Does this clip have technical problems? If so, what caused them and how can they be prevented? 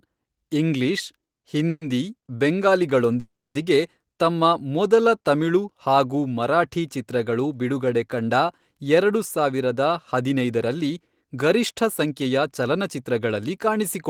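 Yes. There are two call audio freezes, at 1.69–1.83 s and 3.20–3.57 s. Each time the last sound stretches into a fading buzz, then silence for about 30 ms and 220 ms. The speech then resumes where it stopped, now later by 120 ms and 350 ms. Packets were likely delayed in transit, so the jitter buffer ran empty. A steadier network path, or a larger buffer target, prevents this.

From 9.38 s to 13.67 s there is a jitter buffer speed-up. The speech runs about 8% fast at unchanged pitch and sounds hurried. The buffer had overfilled, so the receiver cut many tiny pitch-period slices, about a third of a second in total. Smoother packet delivery avoids this catch-up.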